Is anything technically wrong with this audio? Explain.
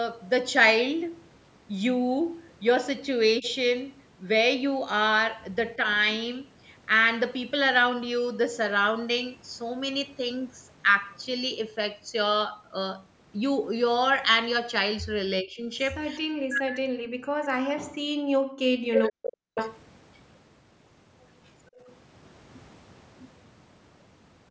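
Yes. The speech dips at 3.40 to 3.45 s, only about 5 dB, again from 15.42 to 15.72 s by about 20 dB, and then drops by as much as about 40 dB from 16.18 to 19.53 s. This is speech suppressed in double talk, likely the echo canceller turning down the near talker along with the loudspeaker echo while both sides spoke.

A delayed copy of the voice comes back at 3.44 to 3.50 s (428 ms late, about 15 dB down), at 19.55 to 19.79 s (484 ms, only about 5 dB down), and very faintly at 21.46 to 21.50 s (491 ms, about 40 dB down). That is echo leak, likely loudspeaker sound the far end's canceller failed to remove.

At 21.75 s the room sound briefly drops by about 14 dB, for about 40 ms, before returning. This is background gated by the echo canceller, which clamped the microphone while the loudspeaker played.

The usual call microphone processing is also audible, with nothing above 8 kHz.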